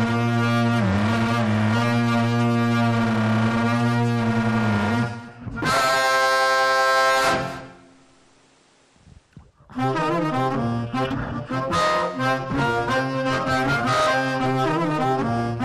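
Nothing stood out as a technical fault on listening.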